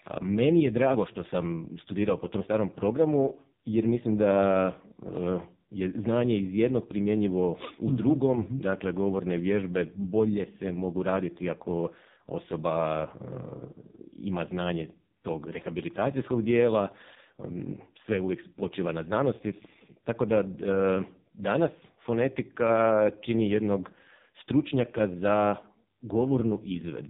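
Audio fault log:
throughout AMR narrowband mobile codec: nothing above 3.8 kHz; heavily buzzy, synthetic speech from a sparse pulse-driven vocal-tract model, consistent with the lowest mode, around 4.75 kbps.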